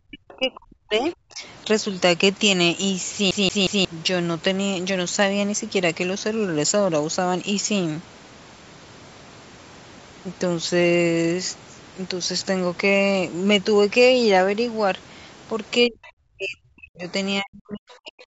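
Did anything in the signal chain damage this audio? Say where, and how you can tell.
Yes. Three kinds of damage are audible.

The speech drops sharply from 0.02 to 1.43 s, 15.87 to 17.07 s and 17.41 to 18.16 s. Within each span it dips by roughly 40 dB in places, losing about a second of level in the first two spans and a bit under a second in the third. The likely cause is speech suppressed in double talk, at the call-processing stage: with both ends active, the echo canceller could not tell the near talker from loudspeaker echo and attenuated both.

At 0.29 to 0.34 s and 16.04 to 16.10 s, faint scraps of a second voice sit about 30 dB below the main speech. This is likely the other side's voice leaking through, again in call processing. The far end, played on the talker's loudspeaker, reached the microphone, and the echo canceller left a residual. Both leaks fall inside suppressed stretches, which fits a canceller struggling with simultaneous talk.

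From 3.31 to 3.85 s the same 180 ms segment plays three times in a row, each jump marked by a brief mute. That even, mechanical stutter is a CD stuck on one turn, a playback-stage fault. A scratch makes the pickup lose tracking and jump back one track at the same point on each rotation, so the loop length equals one revolution's worth of audio.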